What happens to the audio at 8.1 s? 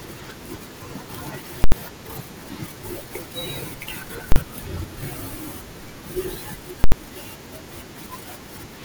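Nothing goes wrong at 8.1 s; the speech plays through that moment intact, with no dropout, click or distortion.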